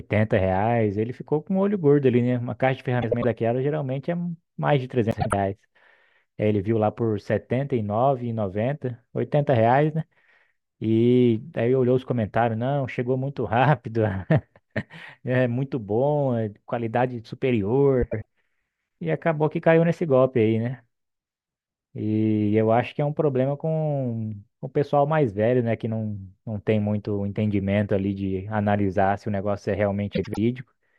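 Frames out of order at 3.02–3.24 s, 5.11–5.33 s, 18.02–18.25 s and 30.14–30.38 s: neighbouring runs of frames, roughly 96 ms each, were decoded swapped. Each speech stretch plays its halves exchanged, a garbled flutter.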